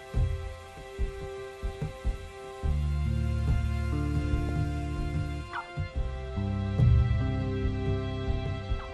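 MP2 compression runs through the whole clip: the sound is dull and carries a gurgling, granular edge, which likely comes from MPEG Layer II coding at a low rate, consistent with something near 80 kbps. With so few bits to share among the 32 sub-bands, the upper bands keep dropping out and coming back, so the top end flickers, and the bands that remain are quantised coarsely enough to make that grainy texture clearly audible.

DAB burbling appears at 1.83 to 1.87 s and again at 4.49 s as brief bursts of burbling laid over the sound. A weak signal let a small number of bit errors slip past the error correction into the MP2 data, and the corrupted samples put short blips of noise into single sub-bands. The first burst covers a couple of frames, and the second hits four frames.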